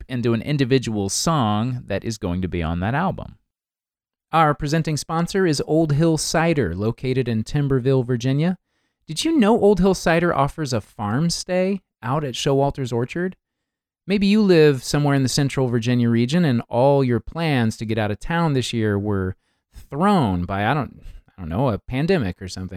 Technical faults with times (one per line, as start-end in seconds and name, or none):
none